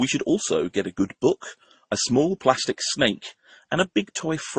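Throughout, nothing sounds above 9.5 kHz, and smeared, watery artefacts stack together. This likely comes from transcoding between lossy codecs, possibly MP3, then Vorbis, then Opus.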